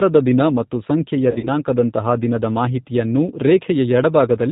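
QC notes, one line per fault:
Throughout: G.729 codec. The speech has the plainly audible roughness of G.729A at 8 kbit/s. Each 10 ms frame is rebuilt from a vocal tract filter, a pitch predictor and a few pulses, not from the waveform itself. That gives voiced sounds a slightly buzzy, synthetic edge. Nothing above 4 kHz survives. Sibilants and breath sound dull and clipped at the top. Fine detail between the pulses is simply missing.
1.31 to 1.50 s: VoIP packet loss concealed by the speech codec. About 100 ms of audio is missing, scattered over 160 ms. The longest gap is 40 ms, and the loss pattern fits about five lost packets. In each gap the decoder repeats its last pitch and filter at falling gain, so the speech turns into a stretched, buzzy tone or coloured noise that fades. Each frame builds on the one before, so the speech stays weak and smeared briefly after audio returns.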